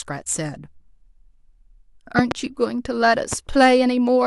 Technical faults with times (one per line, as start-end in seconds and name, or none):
2.19-2.34 loud pop
3.33-3.35 loud pop